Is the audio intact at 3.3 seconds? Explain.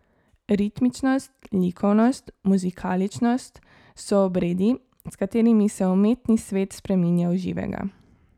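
Yes, at 3.3 seconds the speech plays through intact, with no audible fault at that moment.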